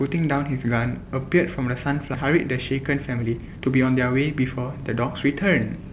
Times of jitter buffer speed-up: 2.34-5.92

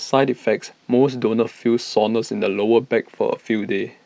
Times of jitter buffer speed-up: none

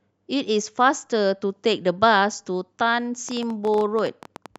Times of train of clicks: 3.29-4.57

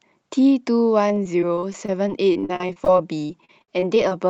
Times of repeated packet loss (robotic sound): 1.08-4.12

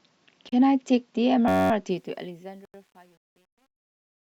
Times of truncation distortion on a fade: 1.90-4.22

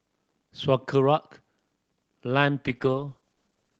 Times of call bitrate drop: 2.66-3.79

